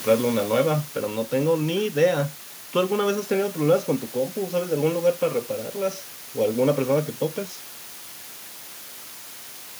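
A steady, even hiss sits under the speech from start to finish. That is low bit depth with dither: only 6 bits, so the noise sits roughly 15 dB below the speech. Automatic gain falling occurs from 0.05 to 1.24 s. The control judges the input too loud, or its background noise too strong, and pulls its gain down by about 6 dB, so voice and background sink together.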